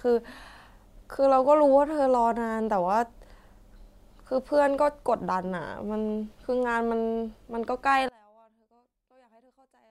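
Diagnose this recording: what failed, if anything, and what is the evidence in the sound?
From 8.09 s to 9.91 s the speech suddenly drops by about 32 dB and turns into a faint residue, as if the centred voice had been hollowed out. This is one channel inverted: with one stereo side in reversed polarity, the voice common to both sides cancels when summed to mono, leaving only their small difference. The stage is likely analogue wiring, such as a balanced lead with its hot and cold legs swapped.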